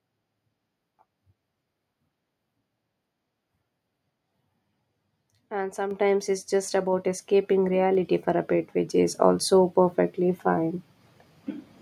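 At 5.91 s, just before "it's just", the microphone volume is stepped up. The call software judged the input too quiet and raised the device's capture level in a single jump of about 6 dB rather than ramping it. Because the change happens at the microphone, the speech and the background noise rise together at that instant, so the level step is audible as an abrupt lift.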